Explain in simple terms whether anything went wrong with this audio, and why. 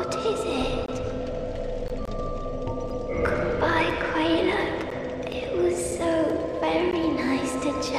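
Two kinds of fault interrupt the sound.

The first is a gap between stream segments. The audio arrives in one-second pieces, and where two pieces don't quite meet, the player fills the space with silence. You hear short, hard-edged holes at 0.86–0.88, 1.88, 2.90, 3.90, 4.91, 5.91 and 6.92 s, each lasting 3 to 22 ms. Their steady once-a-second rhythm gives them away. Nothing is lost; the sound simply resumes slightly later.

The second is a block of digital silence. Here a stretch of nothing was played, likely because the program didn't deliver its output in time. It cuts out abruptly at 2.05–2.08 s for about 23 ms, which fits a 1024-sample buffer, and more briefly at 5.32 s and 6.30 s, where the gaps are short enough to come across as a tick or dip. Unlike the segment gaps, these don't follow the one-second pattern.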